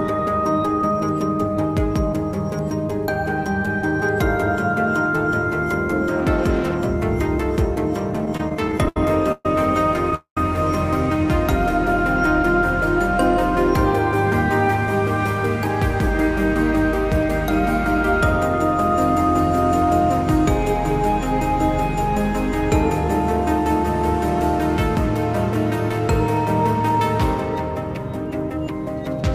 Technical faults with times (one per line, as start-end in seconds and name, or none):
8.25-10.13 repeated stalls (stutter)
10.15-10.37 call audio freeze
25.06-28.58 jitter buffer speed-up